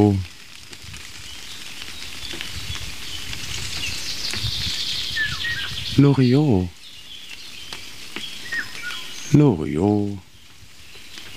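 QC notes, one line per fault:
No fault, so there are no QC notes to add.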